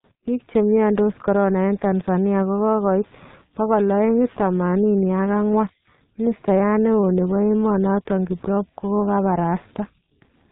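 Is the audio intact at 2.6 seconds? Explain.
No. At 2.6 s, as throughout the clip, heavy G.723.1 codec damage, consistent with a 6.3 kbit/s stream, strips content above 4 kHz and coarsely tracks the voice, leaving speech muffled, hoarse and smeared.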